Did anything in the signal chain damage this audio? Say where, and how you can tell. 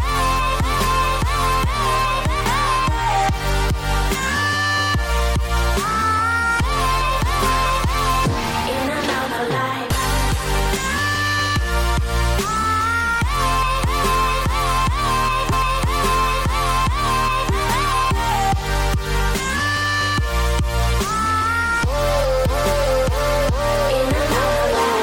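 Yes, at the playback end. There's a stream segment repeated around 15.51 to 17.51 s: roughly 2 s of the programme comes round a second time, and you can catch the small blip where it jumps back to replay that stretch. That's the player fetching or queuing the same chunk of the stream twice, so about 2.0 s of duplicate material gets spliced into the timeline.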